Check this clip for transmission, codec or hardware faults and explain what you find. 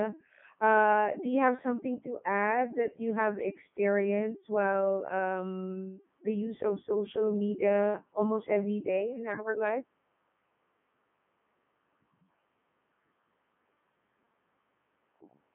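There's one fault, running through the whole speech clip: a Codec 2 vocoder. Only pitch, voicing and envelope get sent, so the speech is rebuilt from sine waves, giving a robotic buzz with everything cut off around 3.6 kHz, which fits its 3.2 kbit/s mode.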